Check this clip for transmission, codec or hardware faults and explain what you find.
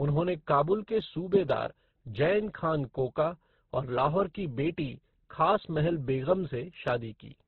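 One fault affects the whole speech clip.

Transcoding between lossy codecs, throughout: the speech was likely re-encoded by several lossy codecs in turn, stacking their artefacts so the different artefacts are heard together, with nothing above 6.1 kHz.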